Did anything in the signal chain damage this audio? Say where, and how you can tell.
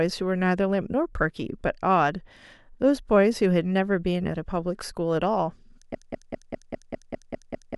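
Yes. From 5.95 s to the end, a 200 ms fragment repeats nine times: a broken-record loop. A playback or stream stall likely caused it.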